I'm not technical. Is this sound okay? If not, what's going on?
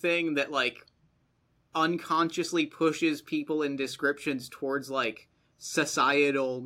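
Yes, this sound is okay, and there's nothing going on with it that needs fixing.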